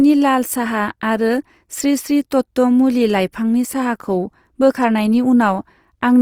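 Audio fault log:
Throughout: Opus compression, likely. The speech sounds plainly grainy and rough, with noise-filled bands standing in for detail, yet it stays fullband up to about 20.3 kHz, which points to the music mode running short of bits at roughly 24 kbps.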